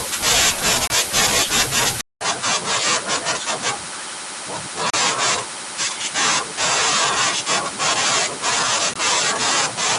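At 0.87 to 0.90 s the speech breaks for about 27 ms with hard edges: a gap between stream segments. Two segments' time stamps failed to meet, and the player padded the hole with silence. The same thing recurs at 4.90 to 4.94 s (about 35 ms) and at 8.94 s (about 20 ms), roughly 4 s apart, in step with 4-second segments. Unlike a dropout, nothing is missing. The speech resumes exactly where it stopped.

From 2.01 s to the end the sound changes character after a 200 ms silence, most likely because the input switched to a poorer device. Nothing above 10.5 kHz survives, so the speech turns duller. It drops by about 5 dB and sits on a new background noise roughly 35 dB below it. A plain low-pass or codec limit would not change tone, level and noise floor all at once at a silent switch point.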